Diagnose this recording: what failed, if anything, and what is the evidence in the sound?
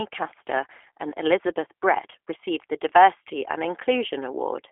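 The failure is at the codec stage. This speech passes through the G.729 codec for its full length. Nothing is heard above 3.7 kHz, and the band sits roughly between 300 Hz and 3.5 kHz. The voice is rough and synthetic, built from a vocal tract model and sparse pulses, which fits an 8 kbit/s stream.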